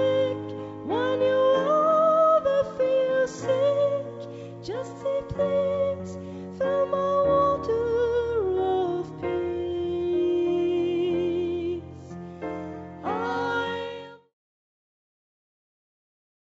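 Nothing here counts as a fault: the sound comes through a G.722 call path that leaves nothing above 8 kHz, and it eases out in a gentle fade from around 13.5 s to 14.34 s, just as intended.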